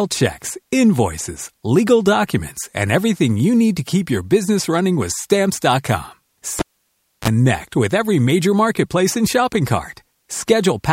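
At 6.59 s a live cable is pulled and plugged in. A pop drops the speech to near silence for 0.64 s. Then 34 ms of 50 Hz mains buzz sounds as only the tip touches. A second pop at 7.28 s restores the sound before "with every major marketplace".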